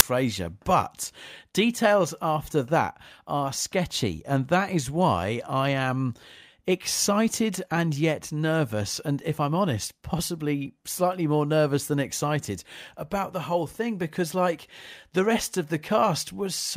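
File tags played as audio at 0.00 s: an embedded cover picture, stored as compressed data, was read as if it were samples, so the clip opens with a very brief burst of very loud white noise with hard edges before the speech begins.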